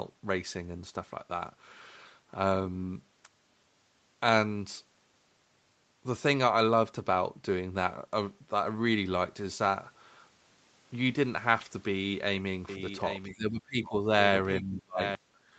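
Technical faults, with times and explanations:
12.69 to 15.15 s, doubled audio track: A second copy of the speech sits roughly 0.7 s behind the first, about 10 dB quieter. It has no reverb tail or room colour, so it is not an echo from a space. It appears and disappears abruptly at the edges of this stretch. The likely cause is the same signal captured again through a slower path, or an edit leaving two copies out of step.
13.29 to 14.08 s and 14.61 to 15.0 s, speech suppressed in double talk: The talker's voice sinks sharply in two places, by roughly 25 dB and then roughly 30 dB. It is affected for a bit under a second, then for under half a second. This most likely happens because the other side was talking at the same time. The echo canceller could not tell near speech from loudspeaker echo, so it turned both down.
15.28 to 15.44 s, background gated by the echo canceller: The room sound drops by about 9 dB for roughly 150 ms, then comes back. 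The echo canceller clamped the microphone while the loudspeaker was playing. It released and the room sound returned.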